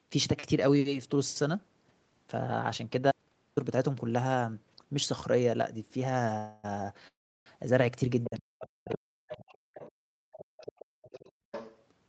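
From 3.11 to 3.57 s an audio dropout to silence removes about 455 ms: sound cuts to silence, likely a lost input, showing as a blank waveform gap with no noise floor.

Call audio freezes follow at 6.37 to 6.66 s and 7.08 to 7.48 s, likely jitter-buffer underruns. The first is a 262 ms fading buzz-like smear; the second stretches 383 ms and ends in 340 ms of silence. Nothing is lost, only delayed. Both appear as smeared horizontal bands on a spectrogram.

Other side's voice leaking through, likely residual loudspeaker echo, appears at 8.24 to 8.29 s, 8.90 to 8.96 s, 9.30 to 9.92 s and 10.33 to 11.83 s, at about -10, -25, -15 and -15 dB relative to speech. It sounds like second-voice fragments and shows as weaker, unrelated harmonic traces.

From 8.26 to 9.42 s, speech suppressed in double talk, likely the canceller ducking both sides, dips the talker by up to about 40 dB for roughly a second, visible as collapsed envelope stretches.

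Between 9.70 and 11.52 s, background gated by the echo canceller drops room sound by up to about 33 dB, for roughly a second in total. The noise floor visibly vanishes on the spectrogram, then returns.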